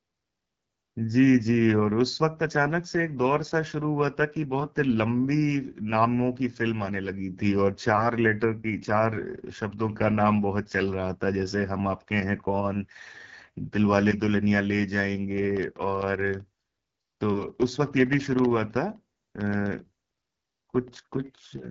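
The speech has passed through the AMR wideband (HD Voice) codec at a low rate, consistent with the 8.85 kbit/s mode, one of its lowest. The codec models the vocal tract and drives it with pulses up to 6.4 kHz, then fills the band above with shaped noise, and nothing remains above 7.5 kHz. At this rate the model cannot follow the speech closely, so the whole clip sounds plainly rough and raspy.

From 15.31 s to 21.65 s, periodic USB or driver dropouts appear. Something is blocking the audio path every 64 ms, and each time around a millisecond of audio is replaced by silence. That produces about a hundred evenly spaced ticks, roughly fifteen per second, forming a steady clicking pattern laid over the speech. The ticks are heard only while sound is present and fall silent in the pauses.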